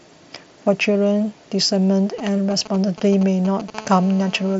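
Speech carried over a wideband Bluetooth mSBC headset link, with the light graininess that codec leaves, has three kinds of fault. Concealed Bluetooth headset packet loss occurs twice. At 0.95 s a 15 ms gap, consistent with two lost 7.5 ms frames, is filled by repeating recent waveform. From 2.58 to 2.61 s a 22.5 ms gap, fitting three frames, produces a brief buzzy sustained tone and a slight warble as real audio resumes. GSM signalling bursts run from 2.19 to 3.70 s. A nearby 2G phone exchanging control traffic emits short groups of radio bursts at about 217 Hz, which the audio circuitry rectifies into a galloping pattern of brief buzzes, roughly 15 dB below the speech. GSM phone buzz follows from 3.75 to 4.55 s. The phone is now transmitting continuously as in a call, and its 217 Hz burst rate becomes a steady, harsh, harmonic-rich rasp about 20 dB below the speech, unrelated to the speech content.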